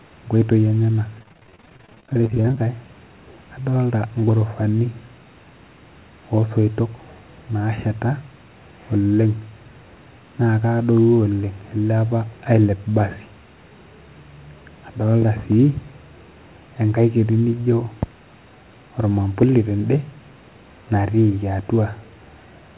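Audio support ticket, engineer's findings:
Choppy, robotic speech from 1.19 to 2.58 s, with dozens of short dropouts, none over 29 ms. Repeated packet loss in the call's jitter buffer: each missing chunk patched by extending prior audio, about 38% of the stretch concealed. Narrowband call path, nothing above 4 kHz.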